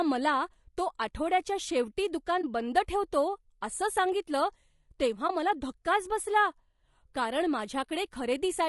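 A speech recording, likely passed through low-delay AAC compression such as AAC-ELD. Its short frames resolve pitch harmonics poorly, and the plainly audible roughness and graininess, with noise filling the gaps between harmonics, fit a bitrate around 32 kbps. AAC frame loss with muting follows at 2.41 to 2.44 s and again at 5.27 to 5.30 s. Each time, the decoder zeroed the missing spectrum, leaving a brief dip of about 20 ms, consistent with a single lost frame, that fades out and back in through the overlapping windows.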